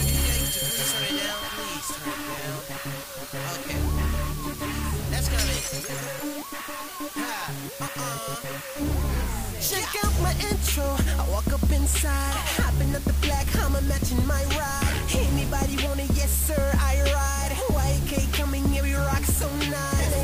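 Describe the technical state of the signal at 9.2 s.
At 9.2 s a steady, even hiss sits close under the sound, only roughly 15 dB below it, yet there is no gritty distortion. That is low bit depth with dither, and it runs through the whole clip. The signal is quantised to just 5 bits, and random dither is added before each value is rounded, so the coarse rounding error is turned into constant white noise instead of harsh, signal-dependent distortion.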